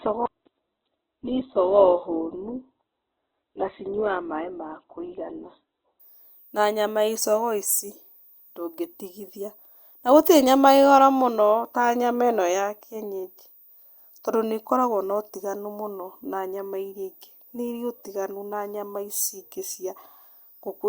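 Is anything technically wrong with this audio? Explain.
Yes. From 0.0 to 6.0 s the speech sounds muffled and smeary, with nothing above 4.1 kHz, then sharpens abruptly without a gap: an adaptive stream starting at a low bitrate, consistent with roughly 8 kbit/s Opus stepping up to about 64 kbit/s once the connection was measured.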